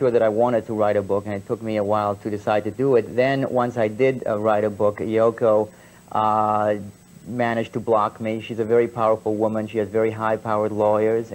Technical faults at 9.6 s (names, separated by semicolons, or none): none